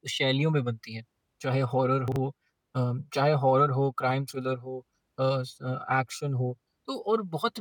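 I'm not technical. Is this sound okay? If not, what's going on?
No. There is one brief glitch in the speech, between 2.08 and 2.16 seconds. It is a fault called chunks out of order. The sound is sent in tiny pieces, here about 40 milliseconds each. One piece arrived a step late and played after the piece meant to follow it. Nothing is missing, but those two pieces are swapped. You hear a quick jumbled blip.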